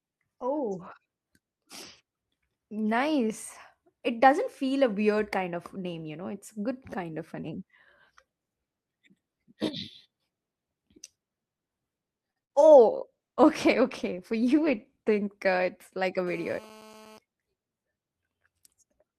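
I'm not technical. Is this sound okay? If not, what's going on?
No. Several separate problems turn up between about 12 and 17 seconds of this speech.

At 12.31 to 12.38 s there is a short stall from a late packet. One piece of the call arrived late, so the receiver held the last sound for about 47 ms until it came. Nothing is lost, which sets it apart from the dropouts that follow. You hear a sound that lingers slightly too long.

At 12.44 to 12.52 s a burst of packet loss removes about 60 ms. The receiver stretched out the last sound and let it fade, then jumped ahead. Unlike the stall just before, that stretch of speech is actually gone, not just delayed.

At 12.60 to 12.71 s a short concealed packet loss patches a smaller hole, about 20 ms. The fill is so brief it comes across as a quick smear or wobble rather than a held buzz, though a short consonant there could disappear.

From 13.11 to 15.97 s a call bitrate drop makes the speech rough and muffled. 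The connection briefly couldn't carry much data, so the sound was squeezed harder, at its worst for almost two seconds. This drop by itself affects sound quality, not timing.

Inside that stretch, at 14.66 to 15.27 s, a jitter buffer speed-up plays the speech about 7% faster. Tiny slices totalling roughly a twentieth of a second were cut out to reduce delay. The pitch stays the same, so it sounds hurried rather than squeaky.

At 16.27 to 17.19 s there's GSM phone buzz: a harsh, raspy hum at 217 Hz from a nearby mobile phone's radio on a call. It stays nearly steady and has nothing to do with the speech, unlike the glitches caused by the network.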